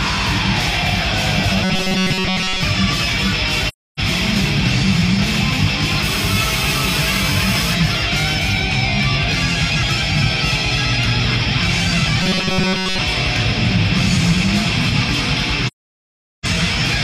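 From 1.64 to 2.63 s and again from 12.22 to 12.98 s, the sound turns into a rigid metallic buzz at 188 Hz. This is robotic sound from repeated short buffers, likely caused by the last few milliseconds being replayed about every 5.3 ms while most of the new audio is skipped. Unlike a steady interference tone, it tracks the sound's shape.

From 3.68 to 4.00 s and from 15.67 to 16.46 s there is AAC frame loss with muting. The decoder zeroed the missing frames, leaving soft-edged silent gaps of about 300 ms and 770 ms. They fade in and out, unlike a hard dropout.

From 6.03 to 7.74 s a GSM phone buzz sits at about −10 dB relative to the signal. It is a harsh, harmonic-rich 217 Hz rasp, steady as during a call and unrelated to the sound, unlike the robotic buzz.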